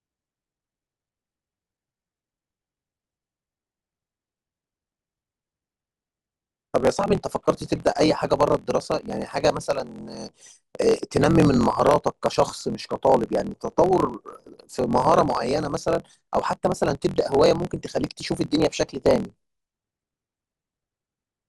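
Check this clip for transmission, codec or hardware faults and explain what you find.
Two faults are audible: a block size mismatch with truncation running through the whole clip, and two short bursts of DAB burbling.

The block size mismatch (truncated) lasts the entire recording. One stage hands on longer blocks than the next reads, and the tail of each block is dropped. The regular discontinuities, consistent with reads of 1024 samples, produce a 43.1 Hz buzz. The speech runs 1.12 times fast while keeping about its normal pitch. A waveform shows small steps at evenly spaced joins, and a spectrogram shows faint vertical lines repeating at the block rate.

DAB burbling appears from 10.92 to 11.0 s and again from 15.20 to 15.31 s. Weak reception lets a small fraction of a percent of bits through the error correction corrupted. Wrong samples in the MP2 data put short blips of noise in single sub-bands, and wrong scale factors, where they get through, make sub-bands jump in level for up to a frame, giving burbling blips over the speech. 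On a spectrogram these bursts look like isolated rectangular patches in separate frequency bands, switching on and off at frame boundaries.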